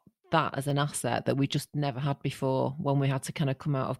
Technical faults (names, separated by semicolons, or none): clock drift buffer slips